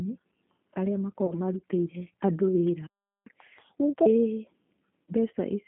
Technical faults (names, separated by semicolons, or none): G.729 codec; VoIP packet loss concealed by the speech codec; playback stall; catch-up at higher speed